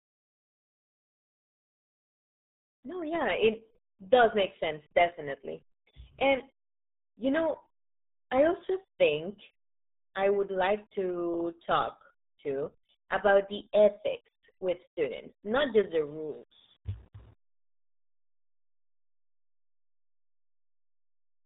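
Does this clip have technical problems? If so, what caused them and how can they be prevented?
Yes. Throughout the clip the speech carries heavy damage from the RealAudio 14.4 codec. Nothing above 3.8 kHz survives, and the speech sounds muffled and gargly, which fits an 8 kbit/s dial-up speech coder. A plain low-pass or telephone band limit would only dull the sound, but this coder also smears and warbles what remains, which sets it apart. To prevent the codec damage, work from an original source and encode it with a modern codec at a much higher bitrate.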